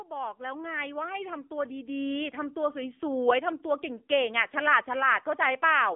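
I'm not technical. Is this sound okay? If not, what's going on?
No. The speech went through an AMR narrowband mobile codec, the compression used on older mobile phone calls. It throws away everything above about 3.5 kHz and squeezes the rest hard, so the voice sounds thin, muffled and noticeably buzzy and artificial, like a poor phone line.

There is also automatic gain rising. The system decided the input was too quiet and kept turning its own volume up. From about 0.07 s to 4.11 s, the voice and background swell together, ending much louder than they began.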